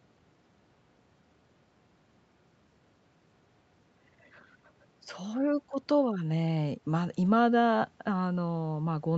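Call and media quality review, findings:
No call or media quality findings for this speech recording.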